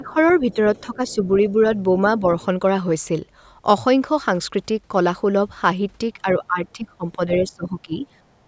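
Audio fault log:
0.0–0.16 s, 0.87–1.25 s, 2.2–2.27 s, 6.22–7.2 s, 7.38–8.04 s, speech suppressed in double talk: the speech dips by about 5 to 20 dB, likely from an echo canceller mistaking it for loudspeaker echo while both sides talked.
0.08–0.54 s, 0.76–1.15 s, 7.34–7.5 s, other side's voice leaking through: a second voice sits about 20 to 30 dB under the speech, likely loudspeaker echo the canceller left in.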